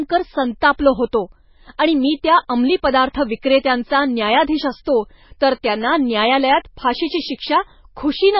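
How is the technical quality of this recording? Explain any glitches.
The recording is heavily degraded by audible MP3 compression throughout.

From start to finish the speech has nothing above 5.6 kHz and a watery, swirling texture, with chirpy, metallic s sounds and smeared consonant attacks. The likely cause is an MP3 encoder starved of bits, which fits a very low bitrate of roughly 17 kbps. Short of bits, it cut the treble at a fixed point and dropped weak frequency lines that flicker on and off from frame to frame. On a spectrogram the energy stops at a hard horizontal ceiling near 5.6 kHz, and below it the harmonics are broken into patchy, blotchy islands. The waveform looks less changed, apart from softened transients.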